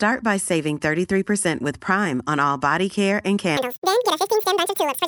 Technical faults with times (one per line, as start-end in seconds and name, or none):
3.57-5.08 wrong sample rate